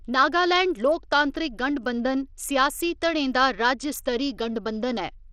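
Bluetooth SBC compression runs through the whole speech clip: the treble thins and flickers, with a gritty, plainly audible grain. This is likely SBC starving its upper sub-bands of bits, which fits a low bitrate near 80 kbps.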